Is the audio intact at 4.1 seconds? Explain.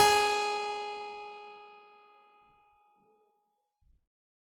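No. At 4.1 seconds, as throughout the music, tones sound noisy, rough and grainy, likely from Opus compression in its CELT mode, consistent with a low bitrate around 16 kbps.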